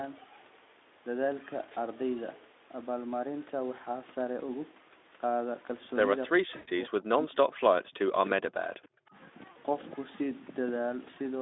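Speech over a call link, with two stretches where the talker gets swallowed, likely speech suppressed in double talk, from 6.32 to 7.36 s and again from 7.57 to 9.15 s. The echo canceller seems to be hearing both ends at once, can't tell its own talker from the loudspeaker echo, and clamps down on everything. The voice dips by up to about 40 dB, patchily, for well over half a second in the first stretch and most of a second and a half in the second. On top of that there's VoIP packet loss concealed by the speech codec, from 6.55 to 6.69 s, right inside that first suppressed stretch, and again from 9.51 to 9.57 s. The decoder covers the 120 ms gap, then the 40 ms gap, by stretching the last pitch and filter shape into a buzzy tone or coloured noise that fades, which fits six and then two lost 20 ms frames. Because each frame is rebuilt from the previous one, the voice stays weak and a bit off for a moment after the packets come back. 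The Speex coding underneath, band-limited to roughly 250 Hz to 3.6 kHz, adds only light coding damage.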